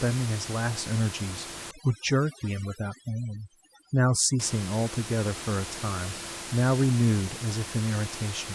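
From 1.71 to 4.40 s, overdone noise removal takes hold. The suppressor cuts frequency bands it mistakes for noise, and quiet parts of the speech vanish with them. The background drops and breaks up into twinkling specks.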